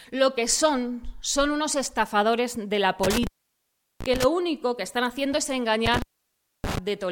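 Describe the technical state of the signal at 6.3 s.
At 6.3 s the signal is cut by an intermittent contact, a loose connection in the cable or plug that breaks the circuit between about 5.86 and 6.78 s, staying open for roughly 0.62 s. The sound drops out abruptly, with crackle where the contact breaks and remakes, and only faint hiss remains in the gap. On a waveform this shows as a near-flat stretch bounded by jagged spikes. A spectrogram shows a dark gap flanked by thin vertical broadband streaks.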